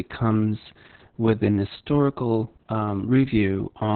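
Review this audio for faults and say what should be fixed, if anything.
Opus voice compression runs through the whole clip, and the damage is heavy. Nothing reaches above about 4.3 kHz, so the speech sounds muffled and boxed in, consistent with narrowband SILK coding. The linear-prediction coder has too few bits for the excitation, which makes the voice hoarse and faintly robotic. That points to a bitrate of roughly 6 kbps with long frames. To prevent it, encode at a higher bitrate that keeps wideband or fullband audio.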